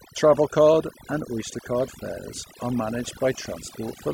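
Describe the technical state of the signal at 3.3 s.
At 3.3 s the speech is under overdone noise removal, which runs through the whole clip: a noise reducer set too hard is shutting off individual frequency bands near its noise estimate, taking quiet vocal detail along, so the background drops and breaks up into twinkling specks.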